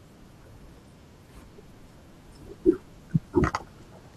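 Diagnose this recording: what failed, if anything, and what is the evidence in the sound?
Compressed frames skipped at 3.41 s, a codec-stage fault: the speech jumps forward by around a third of a second, consistent with about ten lost 21.3 ms frames.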